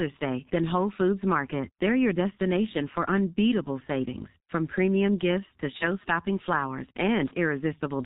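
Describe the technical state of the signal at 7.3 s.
A G.723.1 codec runs through this moment, and heavy compression in what sounds like its 6.3 kbit/s mode removes everything above 4 kHz and updates its voice model only every 30 ms. The speech is muffled and hoarse, with smeared consonants.

From 7.28 to 7.35 s there is VoIP packet loss concealed by the speech codec, a gap that fits one lost 30 ms frame. The decoder fills it by repeating its last pitch and filter at falling gain, so the sound stretches into a fading buzzy tone or coloured noise and stays weak briefly afterwards.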